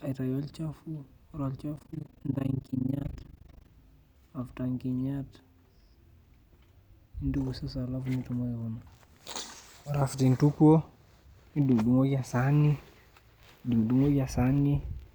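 From 1.76 to 3.69 s there's overlap-add ripple: frames rejoined without constant gain, so the level pumps about 60 dB at around 30 Hz, a harsh flutter.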